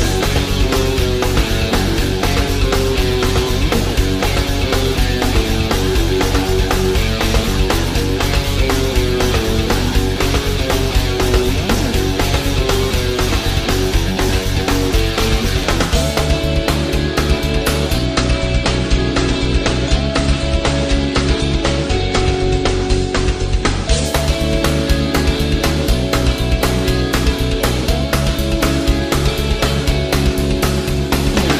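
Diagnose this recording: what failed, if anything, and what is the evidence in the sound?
Adaptive stream at a lower bitrate, 18.05 to 24.05 s, at the network and codec stage. The quality drops suddenly with no gap: nothing remains above 9.7 kHz and artefacts thicken for six seconds, which fits an AAC rendition falling from 96 to 32 kbit/s.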